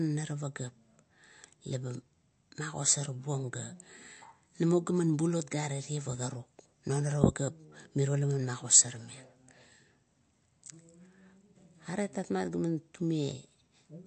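Throughout the speech, the sound points to heavy MP3 compression, likely from an encoder working with too few bits, which fits a low rate around 48 kbps. Starved of bits, the encoder discards everything above 8.3 kHz, so s sounds lose their sharp top, and it zeroes weaker frequency lines that then flicker between frames. The result is a plainly audible watery, swirling texture, with metallic chirps on sibilants and smeared attacks.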